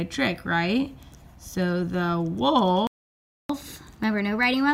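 At 2.87 s the sound cuts out mid-flow and stays silent until 3.49 s, a gap of about 0.62 s. This is a playback stall, likely caused by the player running short of buffered data or its output thread being blocked. Playback then resumes.

From 3.49 s to the end of the clip, the player runs in catch-up at higher speed, resampling the backlog at 1.15 times normal rate. Speed and pitch rise together, with pitch lifted by about two semitones, so everything sounds hurried and sharp.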